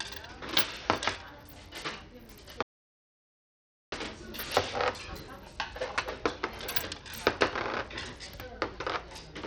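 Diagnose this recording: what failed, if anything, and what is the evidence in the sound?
The damage runs through the whole clip. The top end thins, drops out and flickers, and a gritty, aliased grain rides on the sound. This is likely Bluetooth SBC compression at the codec stage, starved of bits, which fits roughly an 80 kbps stream. Unlike a plain low-pass filter, the treble comes and goes instead of stopping cleanly.

From 2.63 to 3.92 s the sound cuts out for about 1.3 s into complete silence, with no room tone or noise floor left. This is an audio dropout to silence, most likely from a lost input link while the recorder kept writing silence. The abrupt edges and the dead silence rule out a noise gate or a fade.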